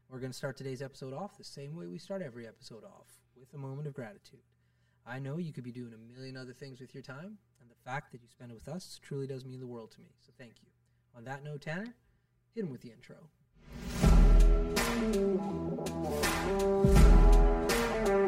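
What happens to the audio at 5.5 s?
At 5.5 s the sound is hollow and phasey from channel delay (comb filtering), present throughout: one channel lags by about 5 ms before the mono sum, cancelling evenly spaced frequencies from around 100 Hz upward, which a spectrogram shows as fixed horizontal notch bands.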